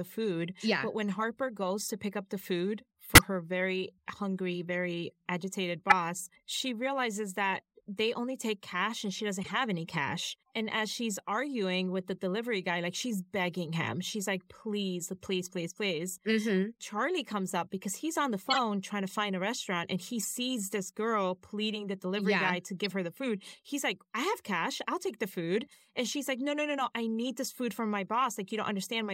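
Corrupt frames are decoded in this speech at 1.85 s, 3.15–3.22 s, 5.89–5.93 s, 9.42–9.51 s, 18.41–18.59 s, 20.20–20.24 s, 22.84–22.92 s and 25.71–25.78 s. Each hit spans a few damaged frames. Flipped bits were played through, so energy lands at wrong frequencies. Each is a short chirp or burst of noise. Those at 3.15 s and 5.89 s are loudest. The one near 25.7 s is faint.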